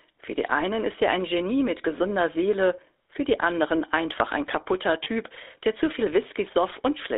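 Throughout, the speech passes through a GSM full-rate codec, whose coarse, pulse-driven excitation fits the 13 kbps coder and a 300 Hz to 3.7 kHz line. The result is plainly audible buzzy, gravelly roughness. From 5.04 to 5.08 s, lost GSM frames, consistent with a single missing 20 ms frame, are bridged by repeating the last good frame, leaving a brief rough, metallic ring.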